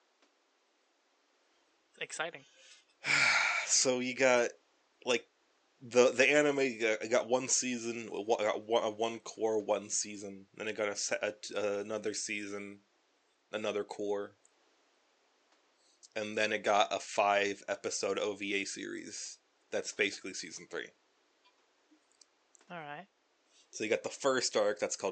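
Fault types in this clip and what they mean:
Nothing's gone wrong here as far as the ear can tell, and the faint room background sits about 40 dB under the speech, just as a quiet room would.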